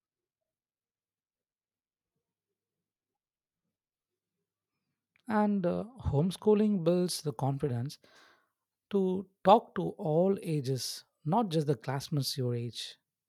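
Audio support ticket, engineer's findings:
Pre-emphasis left on, 6.85 s to end, after "uh homeschooling": treble boost without matching de-emphasis, about 8 dB at 10 kHz, fits CD 50/15 µs curve; thin, bright, sibilant.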